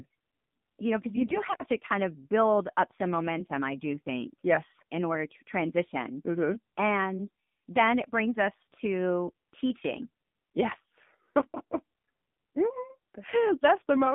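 Speech carried over an AMR narrowband mobile codec: the signal was squeezed into telephone bandwidth, roughly 150 Hz to 3.6 kHz, and coded at a low rate. The plainly audible buzzy, synthetic edge points to a setting around 7.4 kbps. From 1.15 to 1.57 s, AMR bit errors appear. A few percent of the less protected frame bits arrived flipped while the checksum still passed, so the excitation pulses and fine pitch, gain and spectral values decoded wrongly. The voice keeps roughly its pitch and level but turns hoarse, scratchy and gargly.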